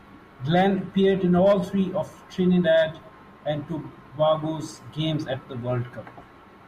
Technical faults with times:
none

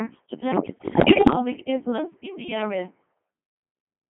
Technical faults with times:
0.00-4.09 Codec 2 vocoder
0.52-1.35 bit errors on digital voice radio

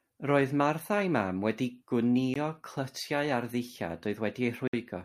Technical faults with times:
2.34 Bluetooth stall
4.68-4.73 Bluetooth stall

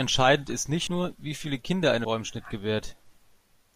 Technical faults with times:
0.86 compressed frames skipped
2.04 compressed frames skipped

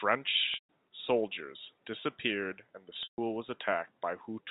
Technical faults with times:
0.54-0.68 packet loss with pitch repetition
3.03-3.18 packet loss with pitch repetition

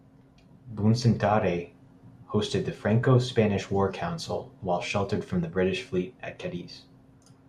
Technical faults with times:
none

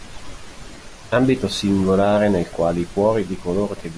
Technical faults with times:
none

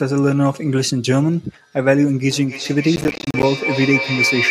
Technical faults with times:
2.31-4.51 feedback howl
2.96-3.43 processor overload crackle

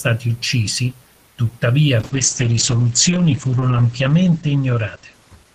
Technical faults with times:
2.00-5.55 call bitrate drop

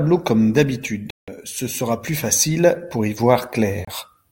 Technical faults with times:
1.10-1.28 Bluetooth dropout
3.85-3.88 Bluetooth dropout

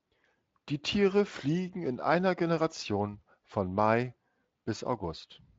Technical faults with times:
none

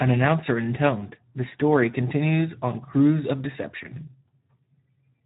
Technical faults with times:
0.00-5.26 Speex codec

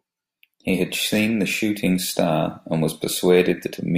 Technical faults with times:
none

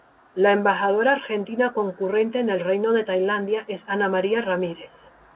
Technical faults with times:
none

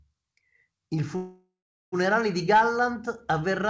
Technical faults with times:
1.16-1.95 call audio freeze

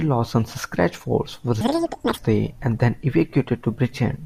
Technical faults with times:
1.61-2.18 audio read two samples at a time (double speed)

